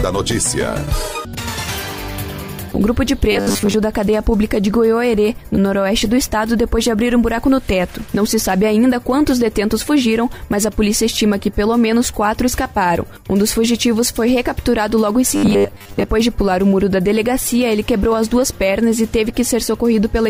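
Twice the audio seems to have been starved of new data, likely because playback ran out and kept repeating its most recent short buffer, roughly 10 ms long, while the real signal was skipped. This is robotic sound from repeated short buffers. From 3.32 to 3.75 s and again from 15.36 to 16.07 s, most of the material is repeated, and the sound collapses into a rigid, metallic buzz fixed at 100 Hz that only loosely tracks the underlying audio.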